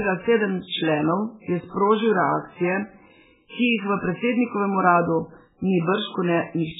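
An encoder starved of bits, likely MP3 compression at a very low bitrate on the order of 8 kbps, has been applied to this speech clip from start to finish. Lacking the budget to code the full spectrum, it cuts everything above 3.8 kHz and drops weak frequency lines that flicker on and off between frames. The result is heavy codec damage: dull, band-limited speech with a watery, swirling texture, metallic chirps on s sounds and smeared consonant onsets.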